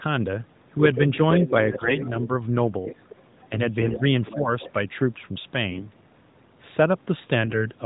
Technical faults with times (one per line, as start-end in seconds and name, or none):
0.95-2.22 other side's voice leaking through
1.72-1.98 AMR bit errors
2.86-4.72 other side's voice leaking through
2.92-3.04 speech suppressed in double talk
3.78-4.01 AMR bit errors
4.35-4.51 speech suppressed in double talk
5.70-5.89 AMR bit errors